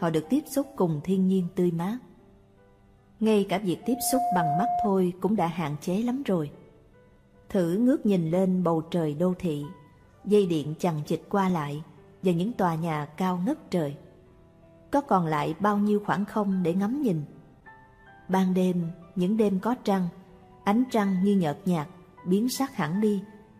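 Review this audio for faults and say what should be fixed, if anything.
Loudspeaker feedback squeal from 3.83 to 4.95 s: a 711 Hz tone swells over about 0.4 seconds to roughly the level of the sound, because loop gain exceeds one at that frequency. To prevent it, lower the monitor gain, move the microphone away from the loudspeaker, or notch out 711 Hz.

Small skips ahead at 9.45 and 11.5 s, each losing a few milliseconds, likely from a dropped buffer (overrun), where samples were overwritten before being read. To prevent it, increase the buffer size or reduce the processing load.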